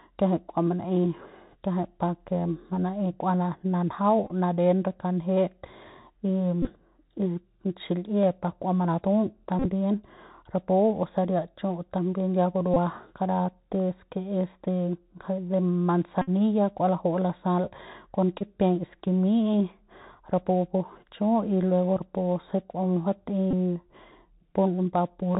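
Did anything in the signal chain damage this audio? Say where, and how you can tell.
Yes. At the codec stage, a Bluetooth CVSD headset codec has narrowed the whole clip: the spectrogram shows a hard ceiling at 4 kHz with a grainy noise floor under the speech. The one-bit up/down encoder's step lags loud high sounds, so s sounds turn scratchy.

Over the radio link, Bluetooth headset packets were repeated at 4.26, 6.62, 9.59, 12.74 (after "también ya"), 16.22 (before "kua laju'u lasal kon"), 18.39 (after "kua laju'u lasal kon") and 23.51 s. Runs of re-decoded 3.75 ms packets buzz near 267 Hz, appearing as identical repeating waveform slices and a harmonic comb on the spectrogram.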